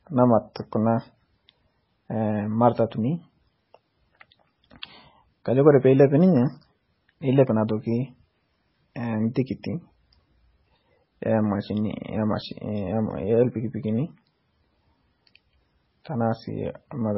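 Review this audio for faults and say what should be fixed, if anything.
Heavy MP3 compression across the whole speech clip: the encoder likely ran out of bits, dropping everything above about 5.6 kHz and switching weak frequency lines on and off between frames, so the speech sounds dull, watery and swirly, with smeared consonant attacks. The damage is heavy enough to fit a very low bitrate, around 16 kbps. To prevent it, encode at a much higher bitrate or keep a lossless copy.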